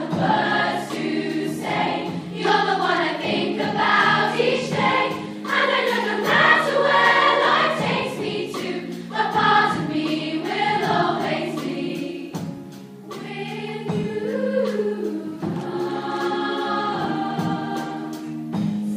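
No technical faults can be heard anywhere in this audio. Nothing in the sound points to a problem at any point in the recording or its playback.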